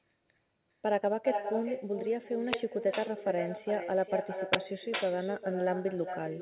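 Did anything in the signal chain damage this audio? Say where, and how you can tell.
Yes. All through the speech, each phrase is trailed by a quieter, thinner copy arriving about 0.4 s later at roughly 8 dB below the talker. That is echo with no canceller at the call-processing stage: the far end's loudspeaker feeds its microphone, and nothing subtracts it.

At 2.53 s, and again from 4.53 to 4.56 s, there is a sudden loud crackle of digital noise. This is an uninitialised buffer in the driver or buffer stage, where stale memory was played as samples. The lengths, about 11 ms and 21 ms, fit 512-sample and 1024-sample blocks.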